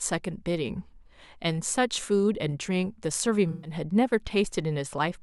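Around 3.51 s there's a dropout that runs to about 3.71 s, and it's AAC frame loss with concealment. A run of coded frames went missing, roughly 128 ms of audio, which points to about six frames, and the decoder papered over the gap by reusing the last good spectrum with its phases shuffled. The speech turns into a smeared, noisy or phasey patch there before clean audio picks back up.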